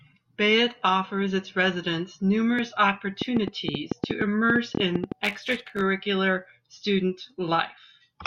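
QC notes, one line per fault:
3.22–5.13 s, train of clicks: just after "offers its residents numerous", about fifteen near-identical ticks arrive unevenly at 8.4 per second, peaking about 15 dB above the speech and audible in pauses. This is likely interference, not random crackle or signal dropouts.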